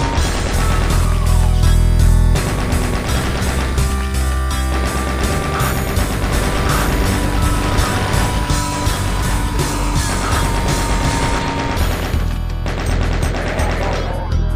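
A dropped buffer at 3.24 s gives a small jump ahead, skipping about 30 ms of sound, likely because samples were overwritten before the program read them.

A doubled audio track runs from 6.3 s to 11.39 s. A dry, full-band copy trails by about a second, some 5 dB quieter, and starts and stops abruptly. The likely cause is a second, slower capture path mixed back in.

A second dropped buffer at 7.95 s skips only about 10 ms, a brief jump within the doubled stretch.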